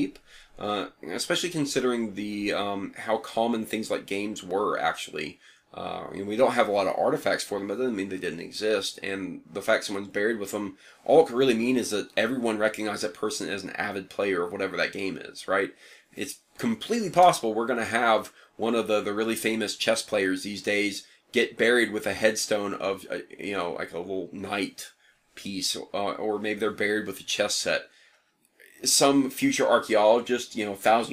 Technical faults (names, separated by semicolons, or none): block of digital silence